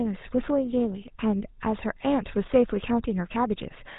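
GSM full-rate codec damage runs through the whole recording, from the first syllable to the last, and it is plainly audible. The speech has passed through a coder that models the vocal tract and excites it with a sparse, regularly spaced pulse train, which fits the 13 kbps GSM full-rate scheme. Nothing survives above about 3.8 kHz, so consonants sound dull, while the coarse excitation gives every voiced stretch a buzzy, gravelly roughness.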